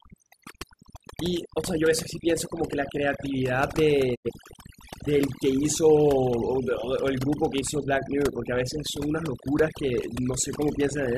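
Overdone noise removal runs through the whole speech clip: the suppressor was set so aggressively that bands near its noise estimate are pulled down or muted along with quiet speech detail, leaving a lowered background broken into twinkling specks. From 4.14 to 4.30 s there is a digital broadcast dropout, where the receiver muted after losing valid data. The sound fades out over about 20 ms and returns later, with roughly 85 ms of programme missing, which fits two lost frames.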